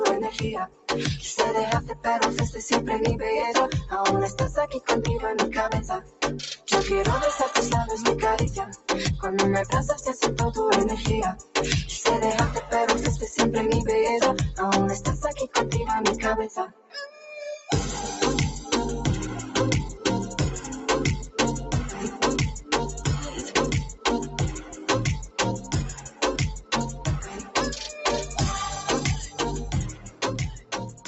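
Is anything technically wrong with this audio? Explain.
Yes. A noise suppressor tuned for speech was left running on sound it treats as noise. Its gain swings by about 10 dB, so held tones and tails pump and thin out while onsets mostly get through.

The sound is cut by the noise suppressor at 0.3–2.06 s, 4.3–6.68 s, 8.64–12.72 s, 15.47–17.69 s and from 21.3 s to the end. Steady or decaying parts drop by about 16 to 17 dB, for roughly half a second to a second in each early stretch. Unlike a dropout, the attacks mostly come through. Only the sustained parts sink.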